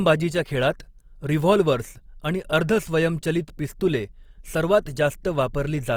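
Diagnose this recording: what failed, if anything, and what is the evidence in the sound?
The fault is at the codec stage. Throughout, the speech sounds rough and grainy, likely from Opus compression in CELT mode at a rate that fits about 24 kbps. Band energies survive, but fine detail is refilled with folded or noise-like content. A spectrogram shows speckled, smeared harmonics reaching 20.2 kHz, with few holes.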